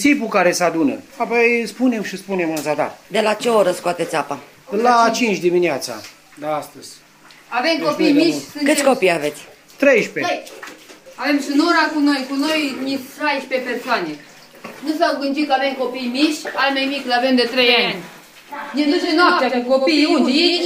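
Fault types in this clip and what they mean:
Doubled audio track: from 17.6 s to the end, a second copy of the full-band audio arrives about 100 ms late, at about 5 dB lower, likely from a slower parallel capture path.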